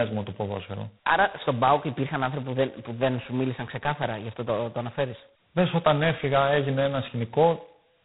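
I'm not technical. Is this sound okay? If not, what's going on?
No. The whole recording has passed through G.726 ADPCM coding at its lowest setting. Each sample is stored very coarsely, so a harsh, rasping hiss rides on the speech and grows with loudness. Nothing above 3.9 kHz remains, giving a thin telephone sound.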